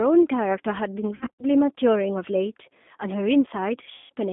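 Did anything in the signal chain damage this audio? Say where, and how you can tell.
Yes. At the codec stage, the whole clip carries G.729 damage. The speech is confined to roughly 200 Hz to 3.6 kHz, with nothing above, and has the slightly rough, synthetic texture of a coder that rebuilds each 10 ms frame from a vocal tract filter, a pitch predictor and a handful of pulses. The damage is plainly audible throughout, and the coder is the 8 kbit/s G.729A variant.

At the network stage, there is VoIP packet loss concealed by the speech codec, from 1.15 to 1.44 s and again from 3.95 to 4.13 s. In the first event, about 150 ms of audio goes missing in gaps scattered over 240 ms, the longest run being 60 ms. The second loses about 150 ms as well. Each matches five lost packets of 30 ms. The decoder fills the holes by extending its last pitch and filter while lowering the gain, so the speech smears into a fading buzzy tone or coloured noise. 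Because each frame builds on the previous one, the sound stays weak or distorted briefly after packets resume.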